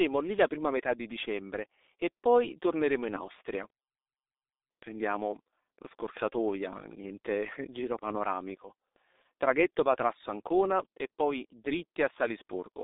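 From start to finish the speech carries heavy G.723.1 codec damage. The audio is squeezed into a telephone band of roughly 300 Hz to 3.7 kHz. It is rebuilt from a coarse voice model refreshed only every 30 ms, at a rate that fits about 6.3 kbit/s. The result sounds muffled and hoarse, with smeared consonants. On a spectrogram, energy stops sharply near 3.8 kHz, the low end is thinned below 300 Hz, and the harmonics look blurred and blocky over time.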